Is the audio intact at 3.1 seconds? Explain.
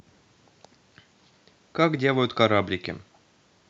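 Yes, the speech at 3.1 seconds is intact, with no fault at that moment.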